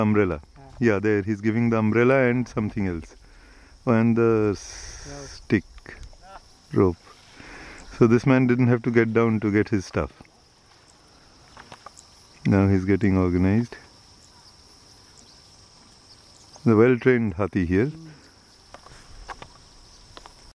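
No technical faults can be heard anywhere in this clip.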